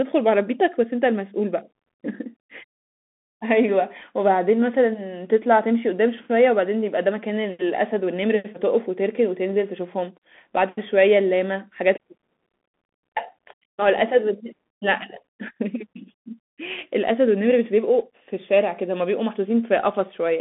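Throughout the speech, the sound carries Bluetooth CVSD headset codec damage. The band is confined to roughly 200 Hz to 3.5 kHz, with nothing above 3.8 kHz. The one-bit delta coding cannot keep up with loud, bright sounds, so s sounds turn scratchy over a granular hiss.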